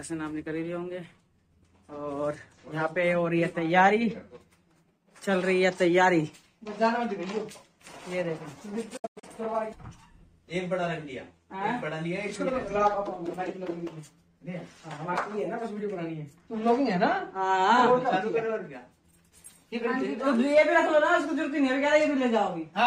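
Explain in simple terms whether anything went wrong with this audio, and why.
Digital broadcast dropout, 8.97 to 9.24 s: the receiver lost clean signal and muted, punching a few quick silent gaps, the longest 96 ms.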